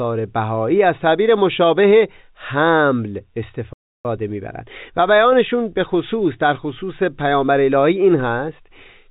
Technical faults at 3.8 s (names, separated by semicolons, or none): playback stall